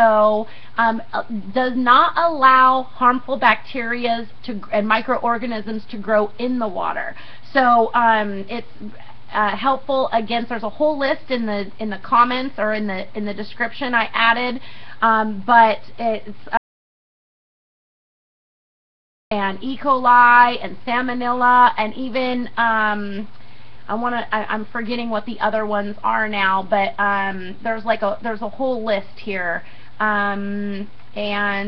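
At 16.57 s the sound drops out to silence, returning at 19.31 s, about 2.74 s gone with no room tone at all. This audio dropout to silence likely comes from lost input while zeros kept being written; waveform flatlines, spectrogram shows a blank band.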